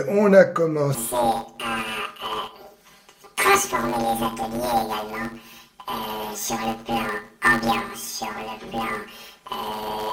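Planar audio read as interleaved runs from 0.95 s to the end. Each 10 ms block stores all its left-channel samples and then all its right-channel samples, but playback treats the block as alternating left-right pairs. Each half of the block is therefore squeezed into double speed, one channel after the other, so the sound is chopped and restitched every 10 ms. At blocks this short, the result is a robotic buzz at 100 Hz rather than an audible octave jump, and the overall tempo stays intact.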